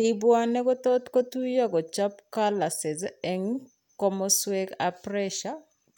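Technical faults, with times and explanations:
No technical faults are audible anywhere in this speech recording.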